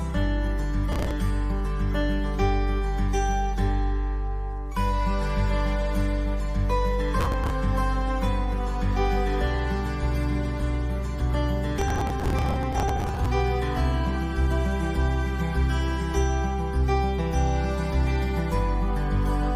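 Processor overload crackle appears at 0.92 to 1.11 s, 7.20 to 7.50 s and 11.78 to 13.26 s. The processor falls behind on buffers of around 5 ms and misses many deadlines in a row. Each late buffer is simply skipped, so the sound jumps forward with hard-edged gaps. Strung together, these produce a gritty, tearing crackle over the audio. The third burst is longest, and each stops abruptly once the load eases.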